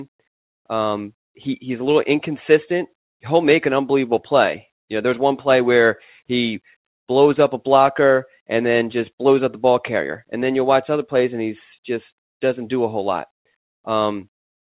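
No technical faults are audible.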